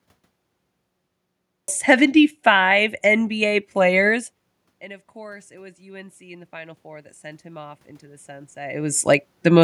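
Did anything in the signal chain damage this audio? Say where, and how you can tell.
Yes: call processing's automatic gain rising after the input fell about 23 dB. From 4.81 to 9.59 s, voice and room noise swell together by about 9 dB.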